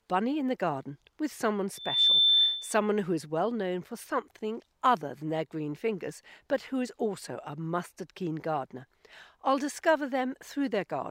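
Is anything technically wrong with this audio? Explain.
Yes. From 1.75 s to 2.80 s there is a loudspeaker feedback squeal, a single tone at 3.6 kHz. It swells from nothing to full strength in roughly a third of a second, then sits about 10 dB above the rest of the sound until it stops. A microphone was picking up the loudspeaker it fed, and at 3.6 kHz the loop gain went above unity, so that one frequency kept reinforcing itself on each pass around the loop.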